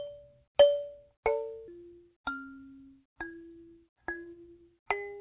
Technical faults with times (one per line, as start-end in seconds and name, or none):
1.68-1.70 skip ahead
3.60-4.95 jitter buffer speed-up